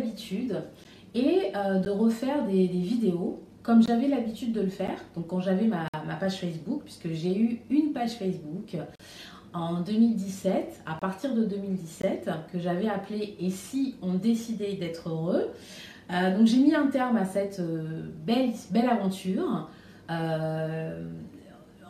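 Segment time stamps failed to line up at several 1-second segment boundaries, and the player filled each gap between stream segments with silence. Hard-edged dropouts cut into the sound at 0.84, 1.85, 3.86 and 4.87 s (about 9 to 19 ms each), then longer ones from 5.88 to 5.94 s, 8.96 to 9.00 s and 10.99 to 11.02 s, with a final brief one at 12.02 s. Nothing is lost; the sound simply resumes late after each hole.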